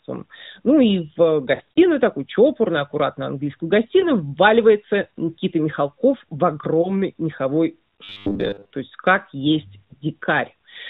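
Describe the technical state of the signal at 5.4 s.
At 5.4 s the speech comes through intact, carried over the AMR narrowband mobile codec path with its usual band limit and no dropout, click or distortion at that point.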